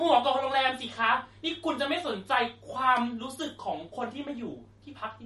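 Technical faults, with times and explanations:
Throughout: MP3 compression. The speech is plainly damaged, with nothing above 11.5 kHz. The cause is likely an MP3 encoder short of bits, consistent with a low bitrate around 40 kbps, so it cut off the treble and zeroed weak frequency lines that flicker on and off between frames. That gives a watery, swirly texture and chirpy s sounds. A spectrogram shows a hard ceiling at 11.5 kHz and speckled, patchy holes in the upper bands.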